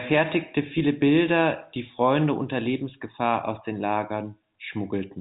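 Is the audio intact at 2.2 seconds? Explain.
Yes, at 2.2 seconds the audio is intact, with only the ordinary G.711 telephone band limit, nothing above about 3.8 kHz, and no fault at that moment.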